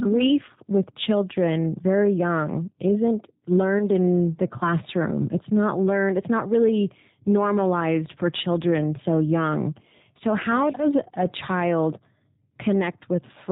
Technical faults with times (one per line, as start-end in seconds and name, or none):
0.00-13.52 G.729 codec
3.79-3.84 VoIP packet loss concealed by the speech codec